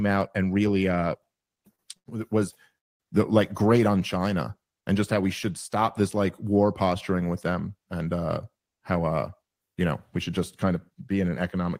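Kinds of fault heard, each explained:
Short stall from a late packet: Twice, a packet arrives late and the jitter buffer runs dry. The receiver holds the last sound until the packet turns up, then carries on from the same point. At 1.75 to 1.82 s the sound is stretched by 34 ms. At 1.97 to 2.09 s it is stretched by 92 ms. Both come just before "was the like great". Nothing is lost, but the sound hangs, with a faint buzz or dip.
Call audio freeze: From 2.78 to 3.03 s the audio stops, just before "the like great on". The likely cause is packets held up in transit, which leaves the jitter buffer empty. The receiver fills 218 ms. Almost all of it, 210 ms, is silence, after a brief held sound fades out. The audio then resumes where it left off. Little or nothing is lost. A gap has been inserted instead.
Jitter buffer speed-up: From 8.58 to 10.91 s the speech runs fast, at 109% of normal speed. 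The buffer holds more audio than it aims to keep, so the receiver trims it back. It cuts many tiny slices, each one or a few pitch periods long. In total it removes about a fifth of a second. The pitch stays the same, but the speech sounds hurried.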